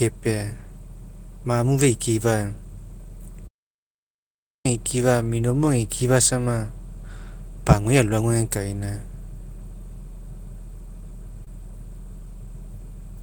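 From 3.47 to 4.65 s the speech falls into an audio dropout to silence, likely a lost input written as silence. Unlike gating, not even room tone remains for 1.18 s. Between 11.44 and 11.47 s, short concealed packet loss shows as a brief smear rather than a gap, as the receiver stretches the preceding sound across the missing 20 ms.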